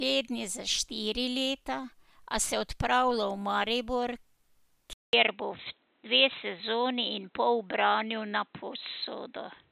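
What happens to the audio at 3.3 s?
Nothing goes wrong at 3.3 s; the speech there plays through intact, with no dropout, click or distortion.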